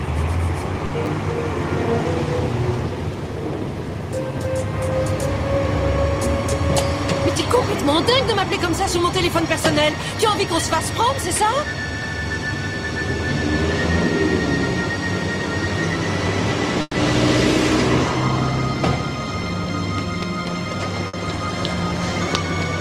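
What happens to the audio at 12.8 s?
Nothing goes wrong at 12.8 s; the audio runs through that moment intact, with no dropout, click, glitch or other audible fault.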